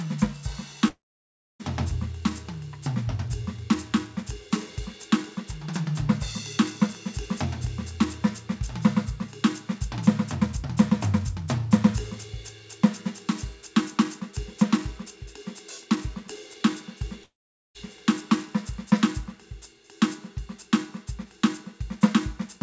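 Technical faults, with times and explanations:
0.88–1.61 s and 17.23–17.76 s, long network dropout: the music breaks off, a brief fading buzz or hiss carries the last sound, then silence for about 0.6 s and 0.45 s. Playback resumes having skipped roughly 0.72 s and 0.52 s of music, likely lost packets, all above a band-limited call path with nothing above 8 kHz.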